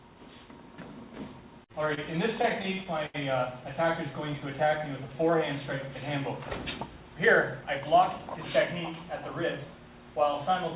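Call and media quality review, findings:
Repeated stalls (stutter), 1.72 to 3.16 s: 11 short hangs, about 197 ms filled in total, longest 80 ms, nothing lost. The jitter buffer keeps running dry and the receiver holds the last sound until packets catch up, so it drags.

Jitter buffer slow-down, 3.83 to 5.40 s: plays at 95% speed with pitch unchanged, about 90 ms added. The receiver rebuilds its reserve by repeating single pitch periods or bits of pauses, which stretches sounds. Band stops at 4 kHz throughout, consistent with G.711 A-law at 64 kbps.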